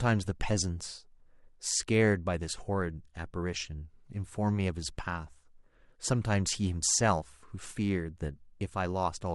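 Listening to this speech recording, nothing technically out of place stood out at any point.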